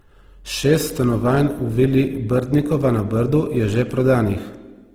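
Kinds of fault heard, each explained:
Opus compression: The speech has a grainy, rough texture, with fine detail replaced by a noisy fizz instead of the swirling gaps typical of MP3. The top end stays present and the band does not narrow. This likely comes from Opus in its music (CELT) mode at a low rate, around 16 kbps. The encoder keeps the energy in each band but fills starved bands with noise or folded copies of lower ones, so the damage is plainly audible throughout.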